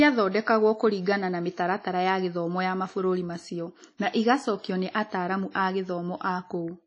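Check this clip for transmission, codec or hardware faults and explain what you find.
One codec fault runs through the whole clip: WMA compression. The audio was likely squeezed through an early Windows Media Audio encoder at a low bitrate, the kind of damage that fits roughly 32 kbps. This transform codec codes sound in long blocks, so its quantisation noise smears across tens of milliseconds and weak components get dropped. In the speech this is plainly audible as a ringing, washy quality with a hiss that swells and fades with the signal, and nothing is present above about 10.1 kHz.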